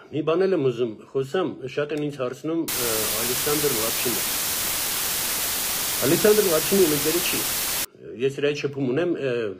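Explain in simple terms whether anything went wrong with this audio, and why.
From 2.68 to 7.85 seconds, low bit depth with dither kept 3 bits, so an even hiss roughly as loud as the sound covers it.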